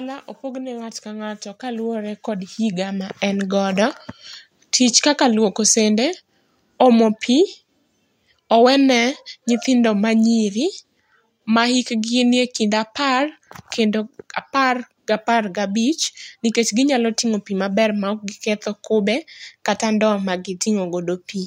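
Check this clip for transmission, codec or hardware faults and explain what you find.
Two level faults from automatic gain control appear in this speech clip.

From 0.41 to 3.58 s there is automatic gain rising. The gain stage judged the incoming level too low and kept raising its gain, by about 13 dB over roughly three seconds. The voice and the room noise beneath it swell together. On the waveform, the envelope widens steadily across that span. On the spectrogram, the noise floor brightens between and behind the syllables at the same rate as the speech.

From 5.2 to 10.97 s there is automatic gain falling. Here the control decided the level was too high and eased its gain down, by about 3 dB over nearly six seconds. The result is a slow, gentle sinking of the voice and its background together. On the waveform, the peaks taper gradually across the stretch. On the spectrogram, the speech and the noise floor both dim slightly and evenly.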